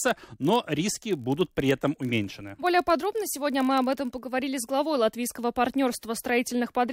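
From 0.0 to 4.3 s, a block size mismatch pads each block with zeros, buzzing at 46.9 Hz. The waveform shows regular gaps, and the spectrogram shows vertical stripes.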